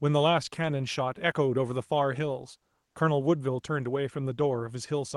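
From 2.87 to 2.95 s, the sender likely stopped transmitting during a pause (discontinuous transmission), so the receiver filled about 80 ms with comfort noise in place of the background. The faint room sound, about 54 dB below the loudest passages, becomes steady, featureless hiss at the same level, alongside the call path's 12 kHz bandwidth.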